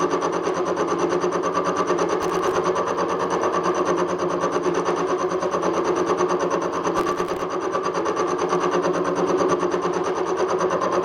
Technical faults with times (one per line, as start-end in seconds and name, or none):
2.22-2.56 processor overload crackle
6.97-7.42 processor overload crackle